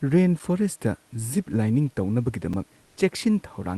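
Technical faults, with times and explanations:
2.53 s, block of digital silence: the sound drops straight to silence for about 5 ms and snaps back with no fade, so you get a single tick rather than a hole you'd notice as a gap. A 256-sample dropout that short fits the output buffer not being filled in time, so the player wrote zeros for one block. The two hard edges are what make the click.
2.85 to 2.97 s, comfort noise in place of the background: for about 120 ms the room behind the speech is swapped for a flat, featureless hiss. It sits only about 1 dB off the real background, so the giveaway is the texture going smooth, not the level. The likely cause is Opus discontinuous transmission: the sender stopped sending during the pause and the receiver filled in synthetic noise until the sound came back.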